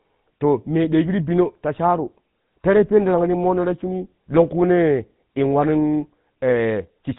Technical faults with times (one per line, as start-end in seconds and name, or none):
0.00-7.19 GSM full-rate codec